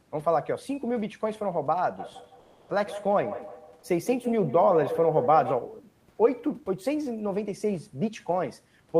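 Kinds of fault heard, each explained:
Comfort noise in place of the background: from 2.39 to 2.69 s, 300 ms of room background becomes a steady, detail-free hiss about 2 dB quieter, likely from the codec's discontinuous transmission. Unlike a dropout, the gap never falls to silence.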